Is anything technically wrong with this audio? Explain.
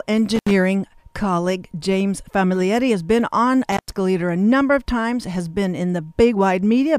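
Yes. Intermittent contact interrupts the speech twice, from 0.35 to 0.51 s with the line open for about 77 ms, and from 3.72 to 3.93 s with about 115 ms open. A loose plug or cable briefly breaks the connection, so the signal drops out and crackles as the contact scrapes open and shut. On a waveform each gap appears as a near-flat stretch bounded by sharp spikes. On a spectrogram it shows as a blank band framed by thin vertical broadband streaks, with only faint hiss inside.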